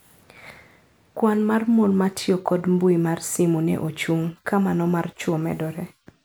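No technical faults can be heard anywhere in the recording.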